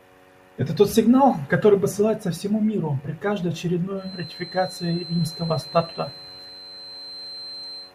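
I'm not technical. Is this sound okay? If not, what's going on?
No. From about 3.94 s until the end of the speech, a thin, steady whistle near 4.1 kHz sits behind the sound, quieter than the talking and slowly swelling and fading in level. This is a feedback whistle. The likely cause is that a loudspeaker's output was reaching the microphone and being amplified again, with the loop held just at the edge of feedback, so one high pitch kept ringing without building into a full howl.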